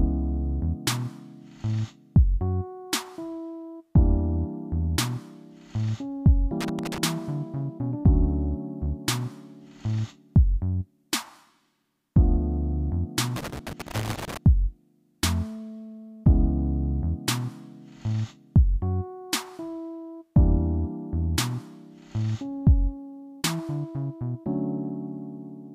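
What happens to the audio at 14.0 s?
At 14.0 s the sound is in the middle of a loose connector crackle burst running from 13.36 to 14.37 s. A worn or dirty contact is making and breaking, chopping the signal into irregular scratchy crackle. Its unevenness and confinement to about one second set it apart from the steady, evenly spaced ticks of a digital clock fault.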